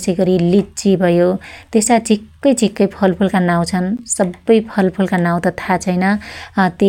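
At 2.77 s the speech drops to digital silence for about 5.3 ms, a length that fits a 256-sample buffer, and at 3.97 s a second, longer block of digital silence lasts 16 ms. In both, the output was filled with zeros instead of audio, most likely because the program missed its buffer deadline. The signal cuts off and resumes with no fade, so the first is heard as a sharp tick and the second as a brief pop-like hole.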